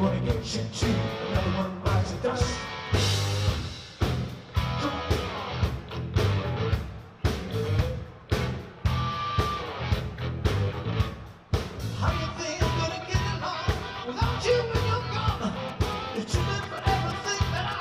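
From 15.69 s to 17.74 s, GSM signalling bursts break in: a galloping dit-dit-dit of short buzzes pulsing at 216.7 Hz, sitting roughly 15 dB below the main sound. A nearby 2G phone is exchanging brief control transmissions with the network rather than carrying a call, and the audio circuitry rectifies that RF energy. The envelope of each radio burst is demodulated into the signal path as audible clicks and buzz.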